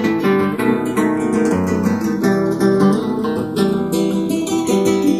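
Throughout the clip the two channels are drifting apart: they were captured on devices running from separate clocks that disagree by something like 50 parts per million, so the delay between left and right creeps steadily, reaching a few tenths of a millisecond by the end. When the channels are summed to mono, the comb-filter notches from that offset glide slowly through the spectrum, and the sound takes on a slow, sweeping flange.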